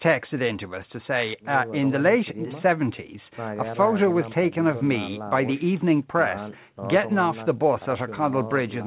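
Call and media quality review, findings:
No call or media quality findings on this speech; the call path carries it as expected for a G.711 A-law link, with nothing above 4 kHz.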